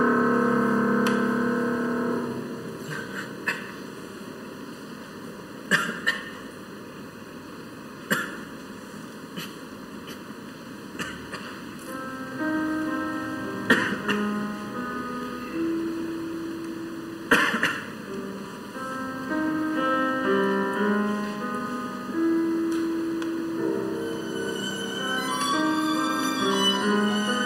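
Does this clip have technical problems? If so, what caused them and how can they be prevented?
Yes. Channel delay (comb filtering) runs through the whole clip. One channel arrives a fraction of a millisecond later than the other, roughly 0.7 ms, and when the two are summed to mono the shared content cancels at evenly spaced frequencies. The first notch sits around 700 Hz, with further notches repeating at regular intervals above it, giving the sound a hollow, phasey colour. To prevent it, align the channels to sample accuracy before any mono fold-down.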